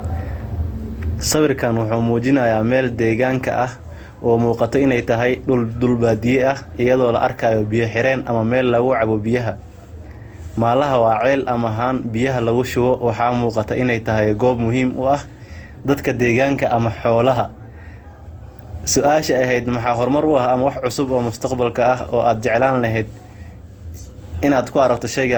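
Throughout the speech, the sound has a swirling, smeared and hollow quality, with consonant attacks blurred and a layer of watery noise that is heavier than a single lossy encode would leave. This points to generation loss: the audio was likely decoded and re-encoded around seven times, consistent with repeated passes through Opus at about 64 kbit/s. Each pass quantised on a shifted frame grid, so noise stacked up, although the band still extends to about 20.1 kHz.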